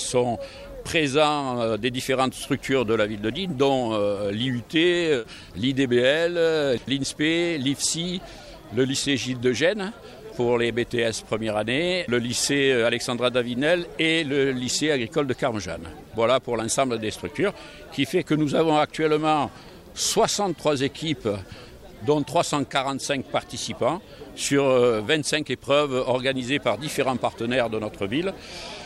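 No technical faults can be heard anywhere in the audio; the signal holds steady and continuous throughout, with nothing breaking into it.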